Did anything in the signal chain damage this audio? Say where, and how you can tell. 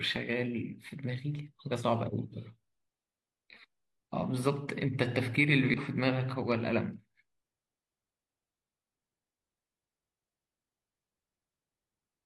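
Yes. The damage sits at the codec stage, in the compressed stream itself. From 5.74 to 5.79 s the speech is broken by a short glitch about 50 ms long. That is damaged data in a compressed stream. Some bytes in that stretch were lost or corrupted. The decoder misread those frames and lost sync. It then hunted for the next valid frame header, producing a brief glitch before normal decoding resumed.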